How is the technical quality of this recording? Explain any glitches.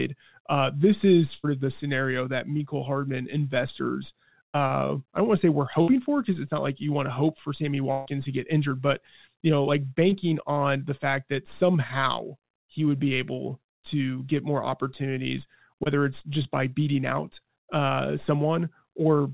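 The recording has six dropouts from packet loss, three longer and three very brief. All of it sits in a narrowband call channel with nothing above 4 kHz, which fits G.711 mu-law at 64 kbps.

The bursts of packet loss are at 1.34 to 1.45 s, 5.81 to 5.90 s and 7.92 to 8.08 s. In each one, a run of packets arrived too late or not at all. The receiver kept extending the last bit of sound and fading it, covering roughly 60 to 140 ms. You hear a held buzz or a dying hiss where speech should be. Then the talk jumps ahead, and that stretch is simply gone.

The short concealed packet losses are at 2.57 to 2.61 s, 10.10 to 10.14 s and 15.84 to 15.88 s. Each time, about 20 ms of audio went missing, and the decoder patched it by continuing the previous sound, either from its pitch or as shaped noise, before blending back into the real signal. The result is a quick smear or wobble, though a short consonant can disappear in the patch.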